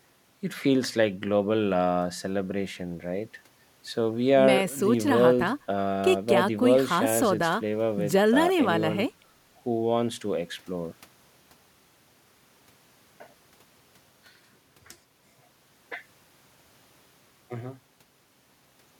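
Nothing in this speech recording stands out as a technical fault; it simply runs along with nothing going wrong that a listener would catch.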